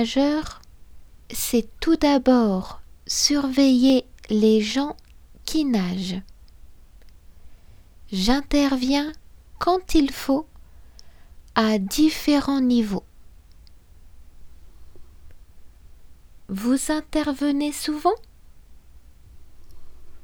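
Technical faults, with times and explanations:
0.78 to 19.46 s, clock drift buffer slips: mismatched device clocks likely make the buffer drop or repeat about 15 samples, heard as a click every 1.04 s.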